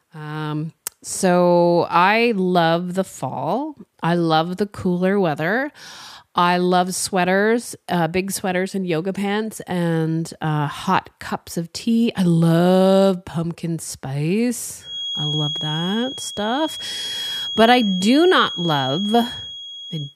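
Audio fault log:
14.78 to 20.16 s, feedback whistle. A thin, steady tone at 3.3 kHz appears behind the speech and runs to the end of the clip. It sits roughly 10 dB below the speech and slowly swells and fades in level. It never runs away into a howl. This is likely a loudspeaker-to-microphone loop held just at the edge of feedback. One high frequency keeps recirculating, so it rings on without building up.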